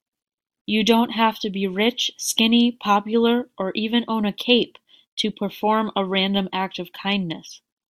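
No technical faults can be heard anywhere in the speech; the signal stays continuous and steady throughout.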